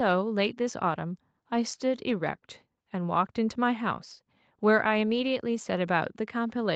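Speech with nothing audibly wrong, carried over a call path with content stopping around 8 kHz and the lowest bass trimmed by the microphone high-pass, both expected for this kind of link.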